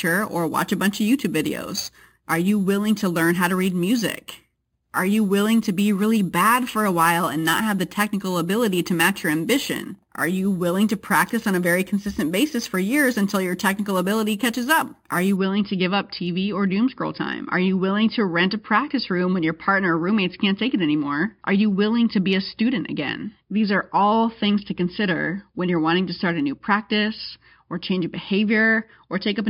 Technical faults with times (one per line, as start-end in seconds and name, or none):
0.00-15.36 imaging from sample-and-hold upsampling